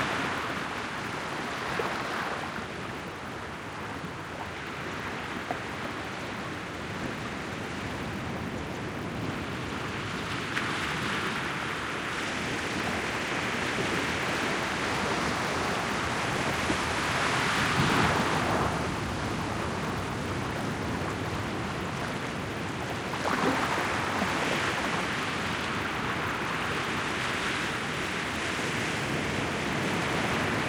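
Throughout the clip, the resampler restarted on every block, converting each 10 ms chunk in isolation. That fits a 24 kHz to 48 kHz conversion. The mismatched block edges leave a small error every 10 ms, heard as a 100 Hz buzz riding on the signal and absent in silence.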